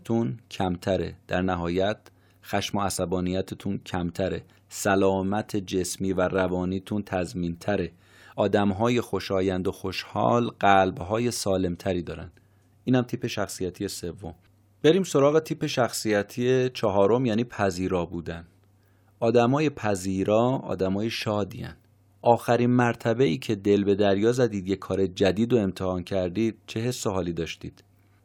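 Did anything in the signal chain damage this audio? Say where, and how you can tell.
No, nothing in the signal chain audibly damages this speech recording. No moment in the clip points to any stage acting on the signal.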